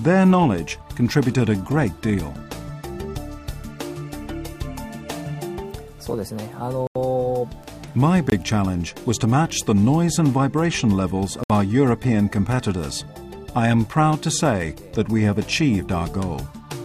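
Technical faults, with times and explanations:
6.87–6.96 s, 8.30–8.32 s, 11.44–11.50 s: blocks of digital silence of about 85, 21 and 64 ms, where the output buffer was likely not filled in time, consistent with 4096- and 1024-sample blocks. The sound cuts out with no fade.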